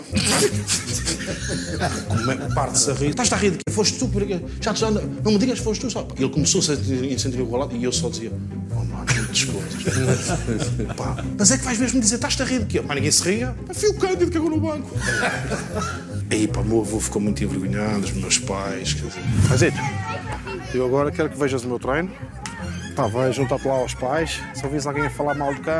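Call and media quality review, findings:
No audible faults found.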